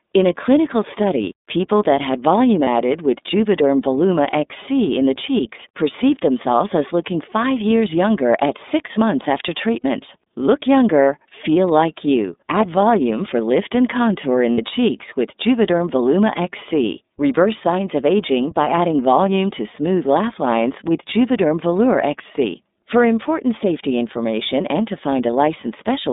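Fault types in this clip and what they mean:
iLBC codec: Narrowband coding throughout, passing roughly 200 Hz to 3.7 kHz, with plainly audible roughness and a synthetic edge on the speech.
Lost iLBC frames: Dropouts at 2.64, 9.8 and 14.54 s, each 30 to 60 ms, filled by a held, buzzy vowel-like repeat before the voice comes right again almost at once.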